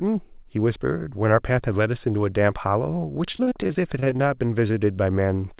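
From 3.32 to 4.21 s, packets kept failing to arrive in time, thirteen times in under a second. The longest hole was 43 ms. Each time, the receiver extended the last stretch of speech to cover the gap, and the next gap came soon after, so about 29% of that span is concealment: 256 ms of filler standing in for 180 ms of missing audio. This is repeated packet loss, and it makes the speech choppy and robotic, with pieces missing.

Right after, from 4.21 to 4.79 s, the jitter buffer was running low or had just raised its target delay, and needed to build up a reserve. The receiver repeated single pitch periods to stretch the audio by 48 ms. The result is a jitter buffer slow-down: speech plays at about 93% speed while the pitch holds steady, so sounds come out drawn-out and slightly sluggish.

Inside that slowed stretch, from 4.68 to 4.71 s, 20 ms of audio failed to reach the decoder. The receiver covered it with 11 ms of sound continued from what came before and blended back in. 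This short concealed packet loss comes through as a brief smear or wobble.

All of this rides on a G.711 mu-law call path with nothing above 4 kHz, which fits a 64 kbps narrowband link.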